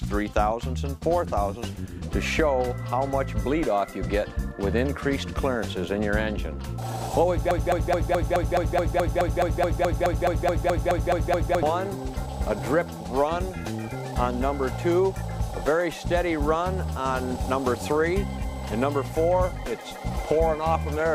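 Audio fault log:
7.51–11.63 s, broken-record loop. A 213 ms fragment repeats exactly, back to back, 19 times. The audio that belonged in that span never plays. The player or stream likely stalled and kept resending the last fragment it held.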